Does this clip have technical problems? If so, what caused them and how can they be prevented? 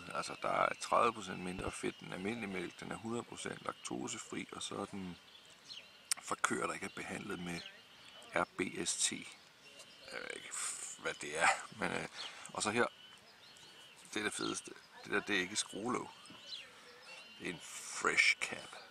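Yes. There is a loud pop, heard as two sharp pops in quick succession between 1.59 and 1.71 s, peaking around 10 dB above the surrounding level while the sound carries on underneath. The likely cause is a sudden voltage step or pulse, such as a connector being plugged in, a switch operating or a static discharge, passing through the signal chain, which shapes it into a brief double thump. Securing cables and leaving switches alone during recording prevents it.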